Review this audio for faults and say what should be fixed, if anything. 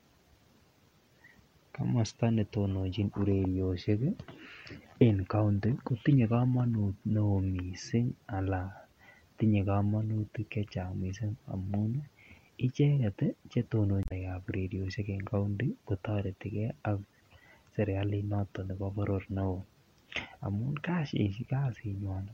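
At 14.02 s there's a short burst of damaged data in the compressed stream, lasting about a tenth of a second to 14.12 s. You hear it as a brief glitch cutting into the speech. What's going on is that a stretch of the encoded file is corrupt, so the decoder can't make sense of those frames, loses sync and has to hunt for the next valid frame header before it picks up again. To prevent it, verify file integrity with checksums after every transfer and re-fetch or re-encode from the original source whenever a check fails.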